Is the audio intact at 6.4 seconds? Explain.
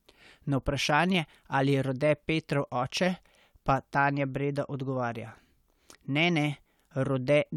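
Yes, at 6.4 seconds the speech plays through intact, with no dropout, click, distortion or other fault audible at that moment.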